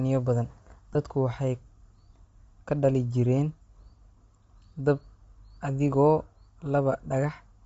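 From start to finish the speech has a breathy, grainy edge, most likely from Bluetooth LC3 compression at a low rate, consistent with roughly 32 kbps and 7.5 ms frames. The codec discards much of the upper spectrum and fills it with noise, so sibilants and upper harmonics sound rough and hissy. On a spectrogram the high band looks speckled and diffuse rather than showing clean harmonic lines.

At 0.94 s and again at 6.93 s there are lost LE Audio frames, each gap about 15 ms long, which fits two 7.5 ms frames. The decoder fills each gap by repeating the last spectrum with random phase signs. Each one is heard as a tiny smeared blip where the voice briefly turns noisy. A spectrogram shows a narrow vertical strip where the harmonics blur into noise. The waveform shows no dropout to silence, just a short stretch of noisy, incoherent cycles.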